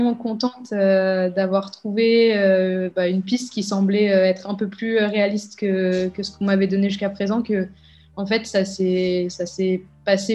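No technical faults are audible anywhere in the audio.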